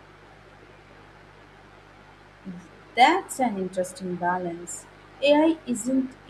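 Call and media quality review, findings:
Mains buzz, throughout. A steady, raspy buzz sits under the speech about 30 dB down. Probable component: dimmer, rectifier or unshielded lead on the capture path. Switching spikes twice per 50 Hz cycle stack harmonics into the kHz range.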